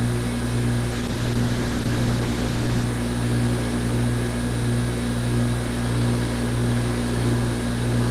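From 0.92 s to 2.95 s there is a call bitrate drop. The call's bandwidth estimate fell, so the encoder was told to spend far fewer bits, consistent with a fall from roughly 32 kbps to about 13 kbps. It held at its lowest for about 1.96 s. With fewer bits the codec quantises the signal more coarsely, so the sound turns rough and watery through that stretch. Fuller detail returns once the rate recovers near 2.95 s.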